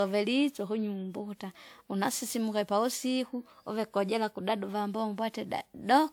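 Generation loss runs throughout the speech: swirly, hollow smearing with blurred attacks, likely from around seven successive WMA re-encodes, consistent with 128 kbit/s, with content reaching about 20.1 kHz.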